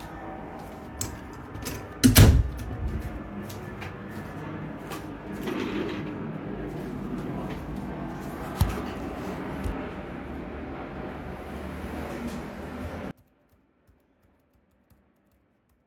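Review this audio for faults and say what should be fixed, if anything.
One channel inverted, 13.11 s to the end: the sound falls about 28 dB to a faint remnant, likely from reversed polarity cancelling shared content in mono. Check polarity on both channels and monitor a mono fold-down before export.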